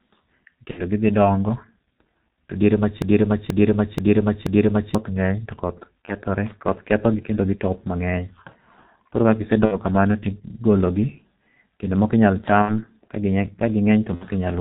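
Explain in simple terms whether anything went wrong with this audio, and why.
The whole recording passed through the G.723.1 codec, an old internet-phone format that cuts off high frequencies, leaving the speech muffled, hoarse and blurred at consonants.

VoIP packet loss concealed by the speech codec occurs at 0.71, 6.05, 9.65, 12.62 and 14.15 s. The decoder filled each gap of 30 to 60 ms by stretching the previous sound into a fading buzz or noise.

From 3.02 to 4.95 s there is a broken-record loop. A 0.48 s piece plays four times back to back, likely because the stream stalled and resent its last fragment.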